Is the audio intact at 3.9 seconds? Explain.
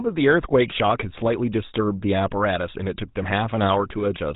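No. The GSM full-rate codec spans the whole clip, rebuilding speech from a vocal-tract model and sparse pulses, so it sounds buzzy, gravelly and dull above 3.8 kHz.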